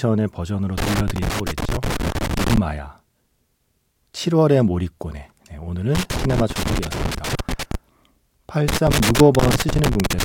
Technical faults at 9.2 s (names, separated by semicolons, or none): loose connector crackle